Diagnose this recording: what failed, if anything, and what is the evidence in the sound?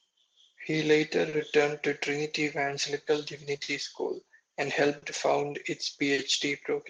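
Clock drift between sender and receiver, at the network or jitter-buffer stage: the sender's clock runs about 4% slow relative to the receiver's. The buffer therefore keeps draining across the whole speech clip, and small timing irregularities recur from start to finish.

Repeated timing corrections, in the jitter buffer, from 0.08 s to 3.12 s: the receiver repeatedly inserts short repeated slices to cover the shortfall, slowing playback to 98% and adding roughly 70 ms in total.

Short stall from a late packet, also in the jitter buffer, at 1.29 s, 3.63 s, 4.98 s and 6.14 s: each time, the buffer ran dry, and the last sound was held for 40 ms (50 ms at 3.63 s) until the packet arrived. The result is a brief held moment with a slight buzz or dip, with nothing lost.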